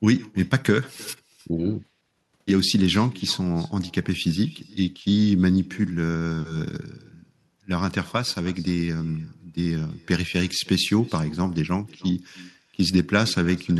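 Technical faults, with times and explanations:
Throughout, echo with no canceller: the far end's loudspeaker feeds its microphone, returning the speech about 24 dB quieter, roughly a third of a second later.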